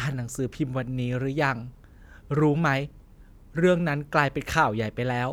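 No technical faults can be heard anywhere in the recording; the signal stays continuous and intact throughout the speech.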